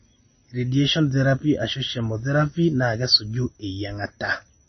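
Speech throughout carries plainly audible MP3 compression artefacts, likely from encoding at a low bitrate, around 24 kbps. Nothing sounds above 6 kHz, and the sibilants turn watery and chirpy. A spectrogram would show a flat ceiling at 6 kHz and speckled, flickering patches below it.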